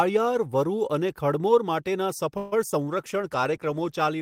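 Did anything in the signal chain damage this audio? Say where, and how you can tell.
Yes. At 2.37 to 2.54 s the speech stalls into a 145 ms fading buzz, then resumes where it stopped. Nothing is lost, but everything after arrives 145 ms later. This is a call audio freeze at the network stage. Packets were likely held up in transit, so the jitter buffer ran dry.

Between 2.70 and 2.86 s there is a brief smear. About 20 ms of audio is missing, replaced by 19 ms of continued sound, and the timing shifts by roughly 20 ms. This is short concealed packet loss: the decoder extrapolated across the hole and crossfaded back.

From 2.94 to 4.10 s the speech turns rough and duller, lowest for about 1.1 s. This is a call bitrate drop at the codec stage. The character fits Opus falling from around 32 kbps to 17 kbps after the bandwidth estimate fell, coding coarsely and trimming highs.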